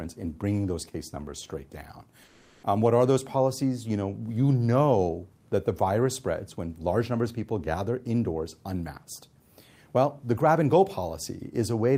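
From 2.23 to 2.63 s, comfort noise replaces the background. The real ambience becomes a flat, featureless hiss, about 4 dB quieter, likely from Opus DTX.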